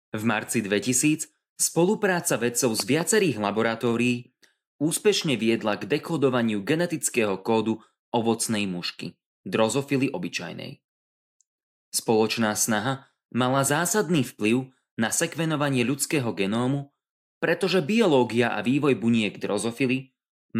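A speech recording with a loud pop between 2.80 and 3.03 s: two sharp thumps in quick succession, peaking roughly 10 dB above the speech, which continues underneath. This is likely a voltage transient from a plug, switch or static discharge entering the signal chain.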